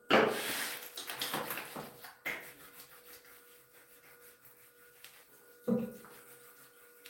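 No technical faults are audible.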